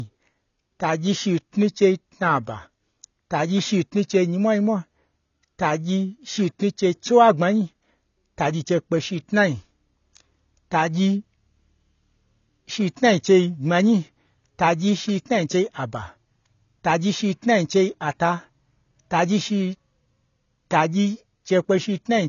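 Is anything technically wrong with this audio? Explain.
Yes. Throughout the speech, the sound is dull and smeared, with nothing above about 7 kHz and a watery, warbling texture on sibilants. This is likely AAC compression at a low bitrate, around 24 kbps: the encoder lowers its cut-off and discards spectral detail it cannot afford.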